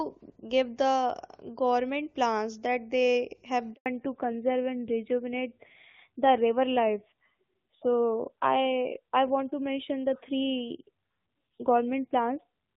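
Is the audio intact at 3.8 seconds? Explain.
No. At 3.8 s the sound falls into a handover gap lasting from 3.74 to 3.86 s, about 120 ms. The call was being moved from one network to another, and no speech frames reached the receiver during the switch. The sound fades out within a few tens of milliseconds and stays silent until the new link comes up. On a waveform this shows as a flat line a little over a tenth of a second long. On a spectrogram it is a blank vertical strip across all frequencies.

When the sound resumes at 3.86 s, the call has fallen back to narrowband and stays that way to the end. Before the gap, the HD Voice quality points to AMR-WB at a high rate, around 23.85 kbit/s. Afterwards, the duller, rougher sound fits an older narrowband codec such as AMR-NB at about 7.4 kbit/s. Nothing above 4 kHz survives, so the spectrogram shows energy up to about 7 kHz before the gap and a sharp ceiling at 4 kHz after it. 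The waveform looks smoother because the fine high-frequency detail is gone.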